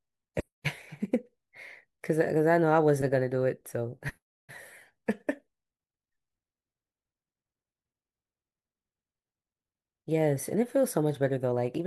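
Nothing in the recording stood out as a problem on listening.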